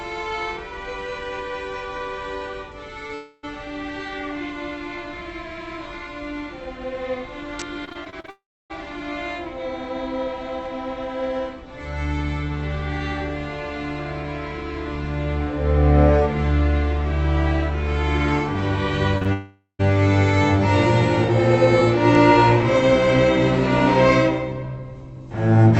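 At 3.07 to 3.11 s a short concealed packet loss leaves a brief smear where about 20 ms of missing audio was patched from the preceding sound.

From 3.15 to 3.45 s a long network dropout is the likely cause of a fading buzz. It never reaches silence, but about 0.28 s of audio is lost.

Between 7.85 and 8.30 s, repeated packet loss (robotic sound) chops the audio. Seven patched gaps, the longest 34 ms, give a choppy texture rather than one continuous hole.

Another long network dropout, again the likely cause, follows from 8.30 to 8.72 s. The patch fades into roughly 0.29 s of silence before the audio returns further on.

At 19.18 to 19.23 s and 19.23 to 19.27 s, two back-to-back short concealed packet losses produce quick wobbles.

A third long dropout, likely the cause again, from 19.33 to 19.81 s has a fading tail and about 0.13 s of silence.

Through the Opus call path, the audio is band-limited to about 8 kHz.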